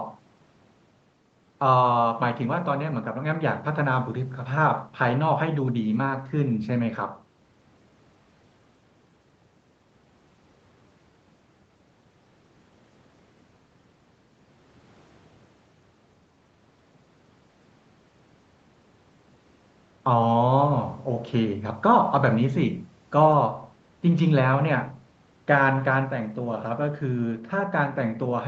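Nothing stood out on listening to this speech, which carries the narrowed top end around 8 kHz expected from a call path using Opus at 32 kbps.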